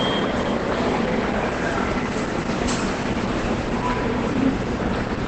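Throughout, the sound is heavily muffled and hoarse, likely Opus compression in its SILK speech mode; a spectrogram shows nothing above 8.5 kHz.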